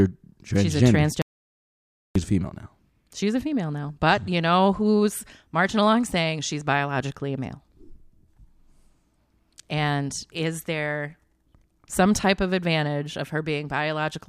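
At 1.22 s the speech cuts off abruptly and the audio drops out to silence for about 0.94 s, returning at 2.15 s just before "female now". The likely cause is a brief loss of the input, through a disconnected device, a failed link or a stray mute, while recording carried on writing silence. Unlike a natural pause, the gap holds no room tone at all, and the speech stops and restarts mid-flow, so whatever was said in between is lost.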